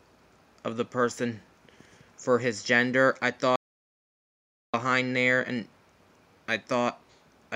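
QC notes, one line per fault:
3.56–4.74 s, audio dropout to silence: sound cuts off abruptly for 1.18 s with no room tone; flat-line waveform, blank spectrogram column; likely lost input.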